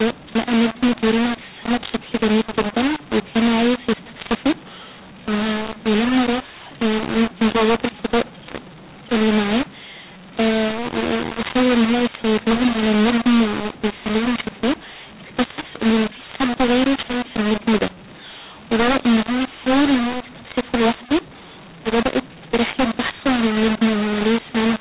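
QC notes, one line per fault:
Throughout, mu-law and A-law mixed up: speech coded as G.711 mu-law is decoded as A-law, so each 8-bit code lands at the wrong point on the logarithmic scale. Levels scramble into harsh distortion, and near-silent samples are lifted, filling pauses with noise.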